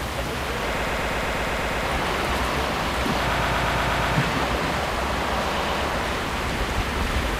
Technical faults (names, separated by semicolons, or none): repeated frames